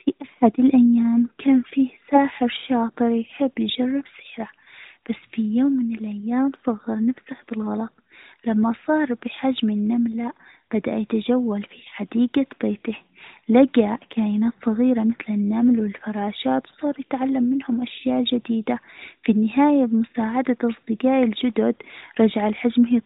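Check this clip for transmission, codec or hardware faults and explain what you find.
No faults found here.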